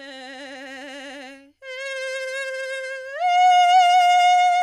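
Listening to this music clip, nothing stood out as a technical problem at any point.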